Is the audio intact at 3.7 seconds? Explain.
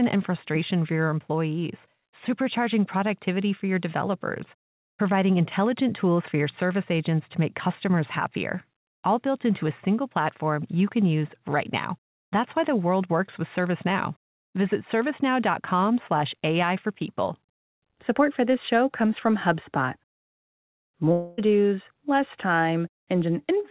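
Yes, the audio is intact at 3.7 seconds, with no dropout, glitch or other fault at that moment.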